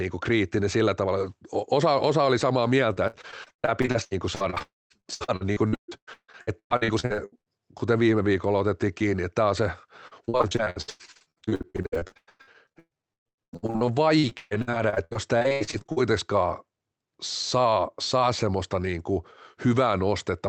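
Speech that turns choppy and robotic in two stretches. The first runs from 2.93 to 7.50 s, starting right after "osa oli samaa" and clearing by "kuten viime viikolla otettiin". The second runs from 10.07 to 15.98 s, beginning after "että tämä on se". Both are repeated packet loss: audio kept failing to arrive in short bursts of up to 150 ms. Each hole was papered over by stretching the last received sound, which gives the choppy, robotic texture. About 38% of the first stretch and 44% of the second is this patched-in sound rather than real audio, with roughly 1.8 s and 2.6 s of speech lost. Inside the first stretch, from 4.62 to 4.92 s, the concealment fades and about 0.21 s goes silent. That is likely a longer network dropout, where nothing arrived for about 0.28 s and that piece never played. The call path itself caps the sound at 8 kHz, consistent with Opus at around 24 kbps.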